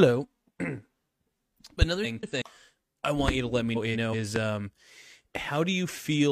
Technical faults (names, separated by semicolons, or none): loud pop; frames out of order